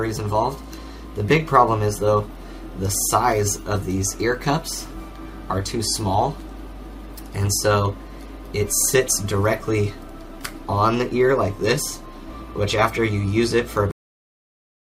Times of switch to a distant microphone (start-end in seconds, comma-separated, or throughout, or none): none